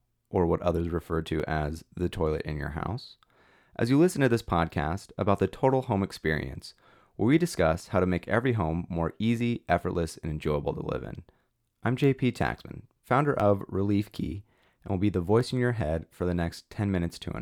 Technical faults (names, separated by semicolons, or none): periodic USB or driver dropouts